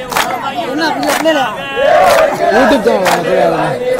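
Hard clipping runs through the whole audio: the signal was driven about 12 dB past what the chain could pass, so peaks are sliced flat and a few percent of samples sit pinned at the limit. Those squared-off tops spray harmonics high up the spectrum, giving a harsh, buzzy fuzz on every loud moment. Unlike gentle saturation, the distortion switches on abruptly at the ceiling rather than thickening gradually as level rises.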